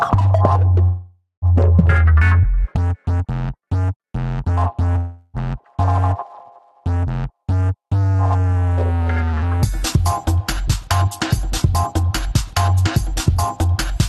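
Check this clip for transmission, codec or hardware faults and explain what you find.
Two kinds of fault are audible: a pair of call audio freezes and one stretch of jitter buffer speed-up. The sound's top end stops near 12 kHz, consistent with an Opus call path at a rate that points to roughly 32 kbps.

Call audio freezes, 0.83 to 1.45 s and 4.98 to 5.37 s: the last sound hangs on as a fading buzz or hiss, about 0.59 s the first time (ending in about 150 ms of silence) and 0.36 s the second. Likely cause: delayed packets emptied the jitter buffer, so playback stalled, then resumed where it left off, losing nothing.

Jitter buffer speed-up, 10.58 to 13.12 s: the sound runs about 4% fast at unchanged pitch. The receiver had banked too much audio and trimmed repeated pitch-period slices, about a tenth of a second in all, to bring the delay back down.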